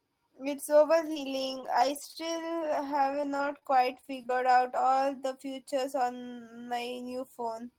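Between 0.93 and 4.89 s the speech shows scattered short gaps: around fifteen lost or late packets, the longest roughly 30 ms. The receiver concealed each by extending the preceding sound, so about 7% of that span is patched, heard as brief ticks and smears.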